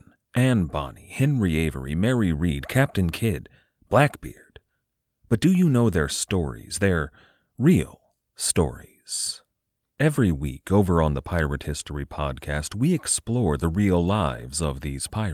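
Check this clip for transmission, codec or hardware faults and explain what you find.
No faults heard anywhere in the speech.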